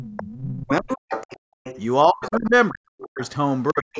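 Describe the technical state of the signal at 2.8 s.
At 2.8 s the speech is chopped and ducked by as much as about 40 dB within 2.05–3.22 s, likely speech suppressed in double talk: the echo canceller mistakes overlapping talk for echo. These are uneven, gain-like dips, not clean packet-loss gaps.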